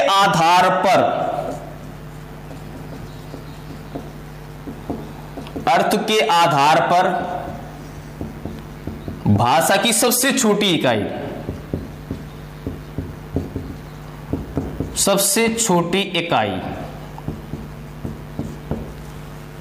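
Gain pumping runs through the whole clip, with the gain swinging by around 15 dB. Loud and quiet passages sit close in level and sound squashed, likely from excessive input gain driving a fast limiter.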